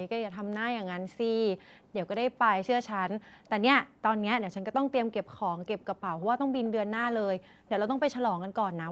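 The room tone behind the speech drops away abruptly, by about 40 dB at its deepest, from 1.65 to 1.94 s, 2.26 to 2.52 s, 3.23 to 3.50 s and 3.87 to 4.04 s, each time springing back a fraction of a second later. This is background gated by the echo canceller: while the far end was playing through a loudspeaker, the canceller pulled the microphone down hard to keep that sound out, taking the ambience with it.

At 6.64 to 6.69 s a faint, brief scrap of delayed speech slips in, about 25 dB below the main voice and trailing it by 295 ms. The likely cause is an echo leak: on a side listening over a loudspeaker, the echo canceller failed to remove all of what its microphone heard, and that residue was sent back down the line.

From 7.39 to 7.66 s the background is gated once more, again dipping by about 40 dB before recovering as the canceller releases. Throughout, the call's microphone processing leaves nothing above 8 kHz.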